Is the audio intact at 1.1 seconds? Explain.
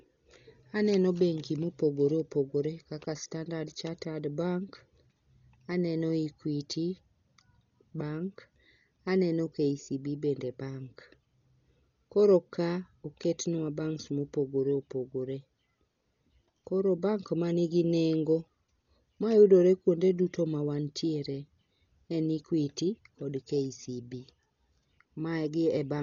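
No. Throughout the speech, nothing reaches above 6.9 kHz, and rough, fluttering dither noise fills the gaps. That points to likely heavy Dolby Digital compression at around 40 kbps, which is noise-filled rather than warbling.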